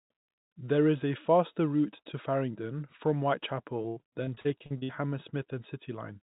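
From 3.82 to 4.91 s, repeated packet loss leaves over a dozen gaps, the longest 81 ms, each patched by repeating the preceding sound, producing choppy, robotic speech.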